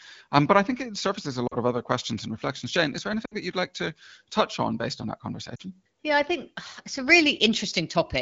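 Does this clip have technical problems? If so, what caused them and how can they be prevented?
Yes. At 1.48 to 1.56 s, just after "think it surfaces a", the speech briefly dips before "of other questions and" resumes. A longer dropout follows at 3.25 to 3.36 s between "is there" and "that you'd like to", and another at 5.55 to 5.62 s after "on based on that". These are lost AMR speech frames. Radio errors corrupted 40, 60 and 40 ms stretches, consistent with runs of 20 ms frames. The decoder bridged each gap by repeating its last pitch and vocal tract settings at falling gain, which made the sound drop to near silence within two frames. Through this, the AMR wideband codec keeps the speech clear, consistent with a 12.65 kbit/s HD Voice link. To prevent these dropouts, improve radio coverage or signal quality so fewer frames fail their checksum.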